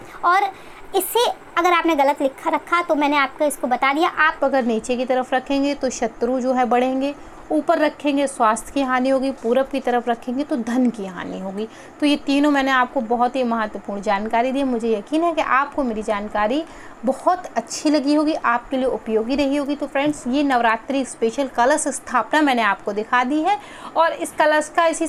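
From 0.0 to 4.39 s a section at the wrong speed runs 1.18 times fast, likely from a wrong playback clock, raising pitch about three semitones; spectrogram harmonics sit higher, then drop.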